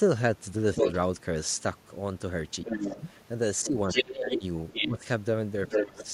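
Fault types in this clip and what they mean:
Other side's voice leaking through: at 0.75–0.95, 2.65–3.09, 3.63–4.99 and 5.67–6.05 s, a second voice roughly as loud as the talker, about 5 dB below it at 2.65–3.09 s, likely uncancelled loudspeaker echo.
Speech suppressed in double talk: at 2.65–2.97, 3.63–5.01 and 5.75–5.99 s, the talker dips by roughly 10 to 15 dB, likely because the echo canceller turned down overlapping speech.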